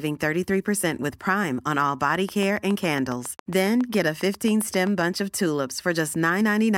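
Speech clip with a train of clicks from 2.15 to 5.02 s, just after "on all": about twenty regular ticks at 7.3 per second, peaking about 5 dB above the speech, most likely from electrical interference or a faulty connection or power supply. A spectrogram shows evenly spaced thin vertical broadband lines, and the waveform shows matching sharp spikes.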